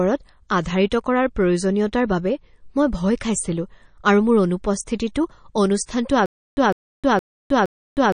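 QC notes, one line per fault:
Throughout, MP3 compression: plainly audible codec damage, with nothing above about 9.5 kHz, a watery, swirly texture as weak frequency lines drop in and out between frames, and smeared attacks. The likely cause is low-bitrate encoding, which fits roughly 35 kbps.
6.26 s to the end, stutter with silent gaps: a 154 ms burst replays four times at a steady 466 ms period, each followed by 312 ms of digital silence, and the audio that should have played is lost. This likely comes from a stalled player replaying its last fragment before running empty.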